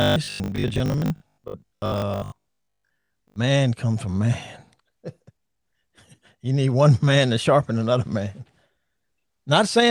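From 0.02 to 3.36 s, audio likely arrived too seldom; repeats patched about half, causing robotic sound from repeated short buffers: a 50 Hz buzz.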